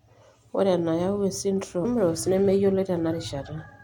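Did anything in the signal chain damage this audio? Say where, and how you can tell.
Yes. A stream segment was skipped at 1.84 s, at the playback stage. The speech jumps abruptly forward with a brief blip. The likely cause is that one segment of the stream failed to load and the player continued with the next, dropping a stretch of programme.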